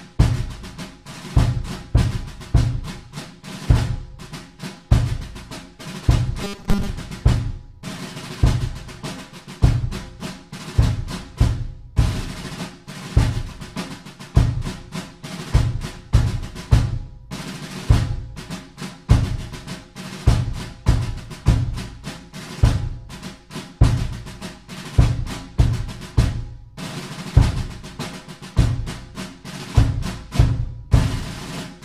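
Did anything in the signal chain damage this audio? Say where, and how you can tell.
Yes. From 6.44 to 6.91 s the sound turns into a rigid, metallic buzz at 200 Hz: robotic sound from repeated short buffers. The likely cause is a starved driver buffer looping a 5 ms block and skipping most of the real audio.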